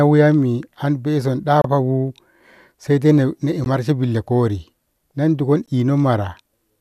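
Speech with a gap at a join of encoded pieces at 1.62–1.64, 3.64 and 5.66 s: 16–29 ms of leftover encoder padding, each a short break after which the speech carries on where it stopped.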